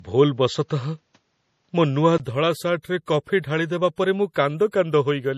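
For the first 2.2 s the speech sounds dull and boxy, with nothing above 7.6 kHz, a faint new noise floor roughly 50 dB down and a level difference of around 5 dB. At 2.2 s a 20 ms gap marks the return to clearer sound, likely an input switched to a poorer device and back.

Throughout, the speech carries a smeared, swirly MP3 character, with nothing above 14.7 kHz. This is likely low-bitrate audio saved at a high bitrate, and it fits an MP3 near 40 kbit/s re-encoded at about 256 kbit/s, which cannot restore what the first pass removed.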